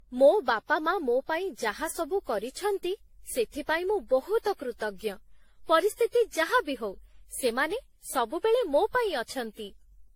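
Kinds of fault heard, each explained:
Generation loss: The speech sounds swirly, smeared and hollow throughout, with blurred attacks and nothing above 16.6 kHz. This is likely from re-encoding about ten times with AAC-LC at 64 kbit/s. Each pass quantises on a shifted frame grid, so noise and spectral holes accumulate.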